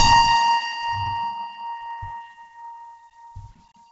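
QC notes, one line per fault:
Throughout, Bluetooth LC3 compression, likely running at a very low bitrate that fits roughly 16 kbps with 10 ms frames. The encoder has too few bits, so it discards most of the upper spectrum and fills the gaps with shaped noise. Nothing is heard above about 7.8 kHz, so the music sounds dull and capped. What remains carries a heavy breathy, grainy edge on tones.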